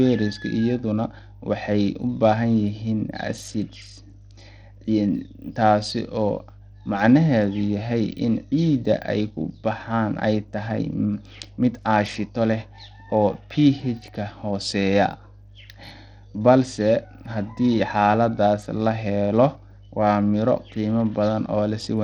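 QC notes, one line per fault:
throughout, mains hum: a steady low tone sits under the speech at 50 Hz, roughly 25 dB below the signal, with some low harmonics above it. It comes from the power line leaking into the signal path through a ground loop or a nearby transformer. On a spectrogram it shows as a thin, unbroken horizontal line at 50 Hz, with further lines at its multiples, running straight through pauses where the speech stops.
throughout, Bluetooth SBC compression: the damage is plainly audible. The treble thins out and flickers in and out, and a gritty, grainy noise rides on the speech along with some aliasing. This is likely SBC coding at a low rate, which fits about 80 kbps. The upper sub-bands get starved of bits while the rest are coarsely quantised. On a spectrogram the top band looks patchy, with blocks that vanish and return, and there is speckled noise around the harmonics.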